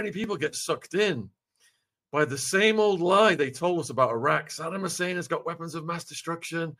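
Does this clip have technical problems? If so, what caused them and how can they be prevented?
No, nothing in this recording points to a technical fault, so there is no cause to trace and nothing to prevent.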